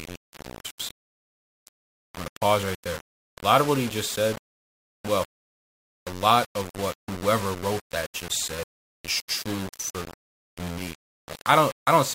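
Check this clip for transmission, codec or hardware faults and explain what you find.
Two faults are present. Throughout, the speech sounds coarse and gritty. The likely cause is low bit depth without dither, consistent with rounding to about 5 bits, leaving grain roughly 15 dB below the speech. From 10.95 s to the end, timecode bleed adds a faint chirping warble. Leaked code flips between tones near 1 kHz and 2 kHz, fitting 25-frame timecode, about 30 dB down.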